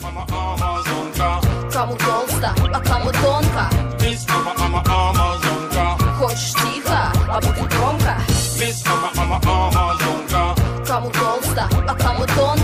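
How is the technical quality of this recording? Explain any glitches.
Two brief glitches mar the recording. At 2.65 s a glitch flicks past, and at 6.58 to 6.60 s a much louder one bursts out. Both are corrupt frames decoded: bit errors in a single compressed frame made the decoder place energy at the wrong frequencies.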